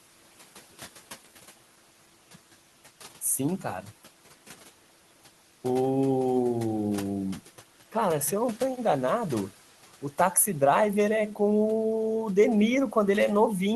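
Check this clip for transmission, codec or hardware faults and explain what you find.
The one real fault here is noise suppressor artifacts, running through the whole clip. The room noise sits about 20 dB under the speech, and the call path cuts off around 12 kHz, as you'd expect from that codec.

The suppressor decides, frame by frame, which bands are steady noise and pulls them down by about 11 dB. So the background drops away in the gaps and climbs back under the speech.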